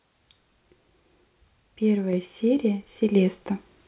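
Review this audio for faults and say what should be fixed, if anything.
Microphone volume stepped up at 2.13 s and again at 3.15 s: each time the speech and the background noise jump together by about 3 dB, as the call software raised the device's input level in one abrupt step. The top end stops at 4 kHz, as expected of a narrowband G.711-style call path. To prevent the jumps, disable automatic microphone level adjustment in the call software and set the input level manually beforehand.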